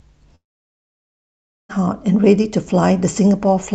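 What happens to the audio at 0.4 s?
The speech cuts to near silence from 0.35 to 1.71 s, likely a long network dropout: audio stopped arriving and the receiver's brief fill faded away.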